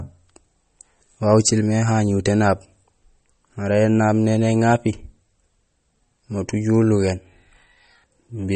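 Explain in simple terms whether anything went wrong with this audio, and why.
The whole clip, start to finish, carries plainly audible damage that's most likely MP3 compression. The encoder was short on bits, so it dropped weaker detail frame by frame, giving the speech a watery, swirly edge, and it cut off everything above about 8.4 kHz, dulling the crispness.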